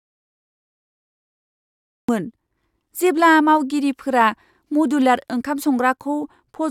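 From the very start until 2.09 s the clip is in an audio dropout to silence: there is no sound at all, not even room tone, and the speech only begins, abruptly and mid-flow, once the signal returns. The likely cause is a lost input, such as a disconnected device or a stray mute, while recording carried on writing silence. On a waveform this opening stretch is a flat line; a spectrogram shows it as dark and empty.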